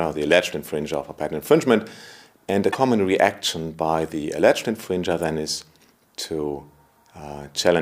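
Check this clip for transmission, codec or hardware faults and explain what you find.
Two brief bursts of damaged data in a compressed stream: 2.68 to 2.75 s and 5.23 s. Corrupted bytes make the decoder misread frames and lose sync until it finds a valid header, heard as a chirp, squawk, click or short hole.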